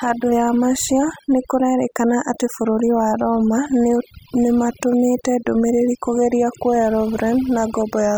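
Across the whole recording the gaps fall to near silence flecked with twinkling specks. This is overdone noise removal: a noise reducer set too aggressively cuts individual frequency bands that sit close to its noise estimate, taking quieter parts of the speech along with the noise.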